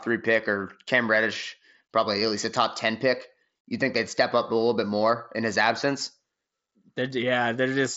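Right at 7.1 s there's a concealed Bluetooth headset packet loss: one lost 7.5 ms packet, patched with recent waveform, so it's barely noticeable, just a tiny blip.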